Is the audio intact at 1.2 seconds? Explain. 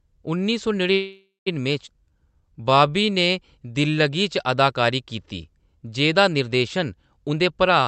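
No. From 0.93 s to 1.48 s the sound stops moving forward: the last instant is stretched into a fading buzz that thins out, ending in about 150 ms of near-silence before the audio resumes where it left off. This is a call audio freeze, likely from packets stalling in transit so the jitter buffer ran dry. The receiver filled roughly half a second, nothing was lost, and everything afterwards arrives about 530 ms later.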